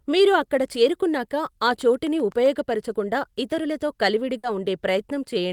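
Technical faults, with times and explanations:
1.68 to 2.73 s, train of clicks: Right after "మీరు అక్కడ చేరుకున్నాక ఆ", a run of about ten near-identical ticks sits on top of the speech at an even 7.7 per second, peaking at roughly the level of the speech itself. The steady spacing and matching shape set it apart from random crackle or a single dropout pop. Something is firing a pulse repeatedly into the signal, likely interference from nearby equipment or a faulty connection or power supply.
4.37 to 4.45 s, burst of packet loss: About 60 ms of the speech goes missing. The receiver filled roughly 60 ms of that gap by stretching the last received sound and fading it, giving a brief held buzz or dying hiss before the speech picks up further along with a piece skipped. That smeared, decaying fill, not silence or a click, is what distinguishes it from a plain mute or a buffer glitch.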